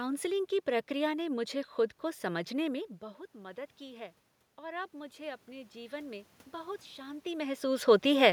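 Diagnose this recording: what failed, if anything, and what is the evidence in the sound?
Automatic gain rising in call processing: from 2.99 to 7.62 s, after "खुद को समझने में", gain climbs about 8 dB, lifting the waveform envelope and spectrogram noise floor together.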